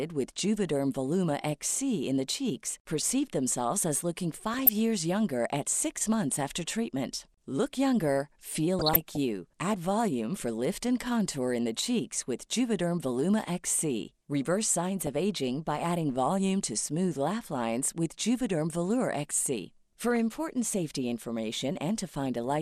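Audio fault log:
Throughout: MP2 compression. The speech sounds dull and plainly coloured, with a granular, gurgling edge. This likely comes from MPEG Layer II coding at around 80 kbps. That rate leaves too few bits for all 32 sub-bands, so upper bands drop out and flicker back in. The bands that remain are quantised coarsely, which gives the rough, watery texture.
4.54–4.69 s, 8.79–9.17 s, 15.02–15.07 s and 20.16 s: DAB burbling. Short bursts of burbling sit over the speech. The 8.79 s burst is the longest, and the one at 20.16 s is only a brief blip. A low error rate, well under one percent, is getting past the error correction into the coded audio. Corrupted samples put short blips of noise into single sub-bands, and corrupted scale factors make sub-bands jump in level for up to a frame. Across the 3 to 16 frames hit in each burst, this gives the burbling sound.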